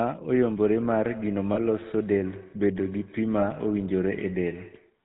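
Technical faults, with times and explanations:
Throughout: GSM full-rate codec. The speech has a buzzy, gravelly roughness and no content above 4 kHz, consistent with the 13 kbps full-rate codec. This coder keeps only a model of the vocal tract and excites it with a sparse, regularly spaced pulse train built from every third excitation sample. The thinned excitation replaces the natural fine structure of the voice, producing a plainly audible grating texture. The hard band limit removes the sibilant and airy upper range.
1.54–1.58 s and 3.40–3.43 s: lost GSM frames. At each point the sound briefly freezes into a rough, metallic ring. Each gap fits the loss of a single 20 ms frame. The decoder has no valid data for that stretch, so it reuses the parameters of the last good frame. This holds the previous sound in place instead of letting the speech continue. Because each loss is short, the ring stops without fading to silence, and the speech resumes.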